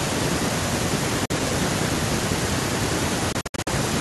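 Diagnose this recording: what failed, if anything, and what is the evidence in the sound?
Bluetooth dropout, likely late packets on the wireless link, leaves abrupt silent holes at 1.25–1.31 s and, scattered, 3.32–3.68 s; speech resumes further along.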